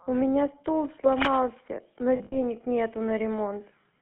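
Throughout, the speech has the buzzy, gravelly roughness of the GSM full-rate codec, consistent with 13 kbps, band-limited to about 150 Hz–3.4 kHz.

From 1.12 to 1.68 s, cable scratch noise adds dense, irregular rustling at about 5 dB below the speech, likely from a worn connector being moved. It is rough and uneven rather than a steady hum.

From 2.16 to 2.40 s, lost GSM frames hold the sound as a metallic ring, not silent gaps or clicks. About 120 ms goes missing in short runs, the longest near 70 ms, which fits roughly six lost frames.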